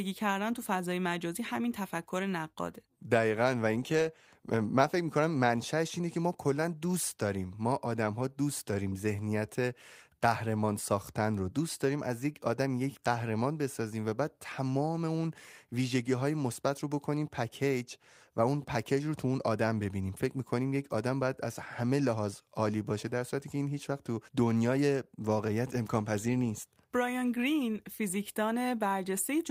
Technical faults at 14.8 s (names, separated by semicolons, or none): none